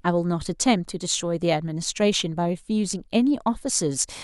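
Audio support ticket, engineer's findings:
Speech signal intact throughout, with no dropouts, level jumps, distortion or timing irregularities found, so no faulty component is identified.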